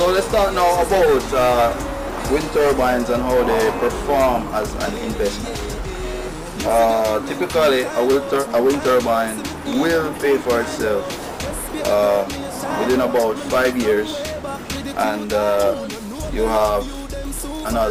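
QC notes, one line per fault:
No faults detected.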